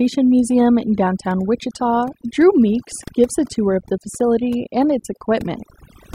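Overdone noise removal runs throughout this speech: over-aggressive suppression cuts bands near the noise estimate, leaving near-silent background with twinkling specks.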